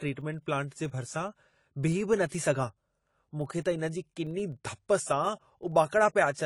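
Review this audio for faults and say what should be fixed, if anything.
The speech sounds dull and smeared across the whole clip, with a fizzy, warbling texture on sibilants and sustained sounds. This is likely AAC compression. The encoder quantises each frame's spectrum coarsely against a hearing model, lowers the bandwidth and leaves gaps or noise-filled bands, and the damage here fits a rate around 32 kbps. Encoding at a higher bitrate, or keeping a lossless master, would prevent it.

A low, steady buzz of about 23.4 Hz runs from start to finish, ticking regularly and growing louder and softer with the speech level. That pattern points to a filter restarted on every block. The filter's state is discarded at each boundary, so every block starts from silence and opens with a small transient. The repeat rate fits a 2048-sample buffer. Carrying the filter state across blocks would prevent it.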